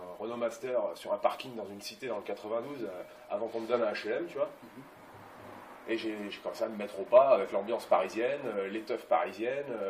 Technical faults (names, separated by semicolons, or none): none